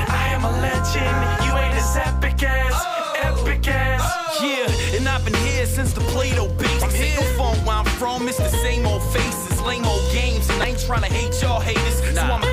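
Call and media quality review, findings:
Damaged data in the compressed stream: two short glitches, about 34 ms each, at 6.79–6.83 s and 10.61–10.64 s. The decoder hits corrupted frames, loses sync and resyncs on the next header.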